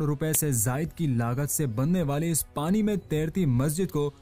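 At 0.35 s there is a single sharp, loud click: a file header played as audio. When WAV pieces are joined or streamed without their headers stripped, those few dozen bytes of metadata are read as sample values, producing a brief, large spike. What separates it from a clock or buffer glitch is that it sits exactly at the start of a piece and is unrelated to the surrounding sound, rather than recurring at a regular interval.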